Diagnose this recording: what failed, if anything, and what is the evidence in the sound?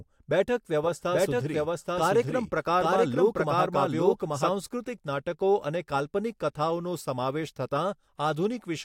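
The capture path or an edit likely mixed in a second copy of the speech, giving a doubled audio track from 0.83 s to 4.51 s. A full-band duplicate at roughly equal level trails by about 0.7 s with no decay or room colour, and it starts and stops abruptly.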